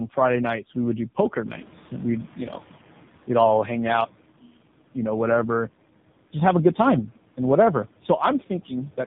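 Tandem speech coding runs through the whole clip: the speech was decoded and re-encoded twice, each speech coder compressing the previous one's damage. The result is rough, muffled and warbly, with nothing above 3.8 kHz, which fits a GSM full-rate leg followed by AMR-NB at 7.4 kbit/s. Room noise rises by about 10 dB around 1.5 s.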